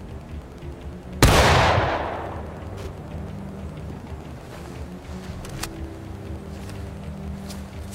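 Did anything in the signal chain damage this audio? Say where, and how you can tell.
Yes, there's Wi-Fi interference in the analogue wiring, running through the whole clip. You can hear a steady tick about ten times a second, every 102.4 ms, sitting roughly 30 dB under the signal. That's a nearby radio's beacon being rectified by the audio circuit.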